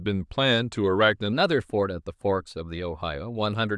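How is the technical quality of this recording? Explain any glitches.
The recording has one fault, covering roughly its last two thirds.

Wrong sample rate, from 1.33 s to the end: the samples are clocked out faster than they were captured, with no conversion between the two rates. Because speed and pitch are both tied to that clock, they shift together. The speech runs about 1.09 times too fast and sits roughly 1.47 semitones high, which fits 22 kHz material being played back at 24 kHz. The voice sounds slightly hurried and brighter.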